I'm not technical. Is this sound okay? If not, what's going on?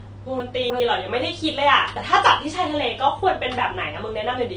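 No. Between 0.4 and 0.8 s there are chunks out of order: a 100 ms piece of the speech plays three pieces later than it should. Nothing is missing, but that moment sounds jumbled.

Throughout, the speech sounds dull, with nothing above about 9.6 kHz. The likely cause is low-bitrate audio saved at a high bitrate: an earlier heavy compression removed detail, and re-saving it as a larger MP3 could not bring that detail back.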